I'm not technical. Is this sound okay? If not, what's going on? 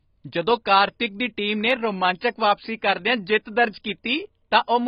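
No. AAC compression runs through the whole clip: the speech sounds dull and muffled, with a watery, smeared texture. This is likely from heavy data-saving compression, which throws away fine detail to make the file small.

Dropped samples cause two clicks, at 1.71 s just after "ਕਾਰਤਿਕ ਦੀ ਟੀਮ ਨੇ" and again at 3.68 s. Each is likely a single missing sample, so the sound wave jumps abruptly and makes a sharp tick.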